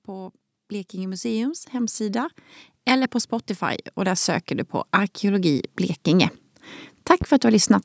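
From about 0.08 s to 4.55 s you can hear automatic gain rising: the gain control decided the input was too quiet and kept nudging its gain up, about 12 dB in total by the end. It's a slow swell rather than a jump, and the background comes up right along with the speech, so the room seems to creep closer. The climb finishes just before "du på".

Then at 7.22 to 7.25 s there's a single loud pop, a short sharp click sitting a few dB above the speech while the talking carries straight on underneath. It sounds like one brief voltage spike hit the signal, likely from a plug, switch, static discharge or driver hiccup, and got shaped into that quick snap. The whole clip also stops at 8 kHz from the call's microphone processing.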